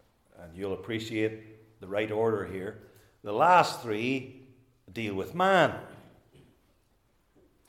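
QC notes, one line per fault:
No faults found.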